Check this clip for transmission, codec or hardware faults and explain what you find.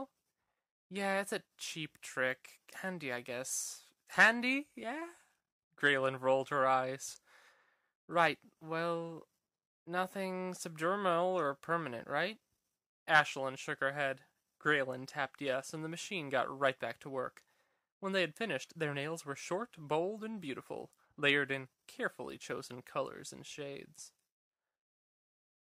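One transmission fault shows up, at 4.15 to 4.17 s: chunks out of order. A 10 ms block of audio was delivered or written one chunk late, so it plays after the block that should have followed it. Nothing is missing, but the two pieces are swapped, which leaves three hard joins where the waveform jumps abruptly. Those joins come through as a brief jumbled flicker in the sound.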